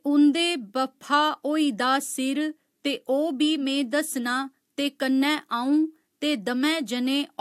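No technical faults can be heard anywhere in the recording. Nothing in the audio stands out as going wrong at any point.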